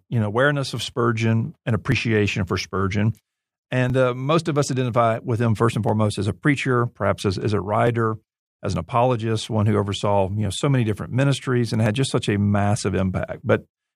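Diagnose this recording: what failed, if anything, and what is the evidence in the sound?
The failure is in the driver or buffer stage: periodic USB or driver dropouts. Regular ticks in the speech recur every 1.99 s from 1.92 s to about 13.8 s. Each is a skip of around 10 ms, with audio dropped rather than silenced, as a background task briefly stalls the USB transfer or audio driver.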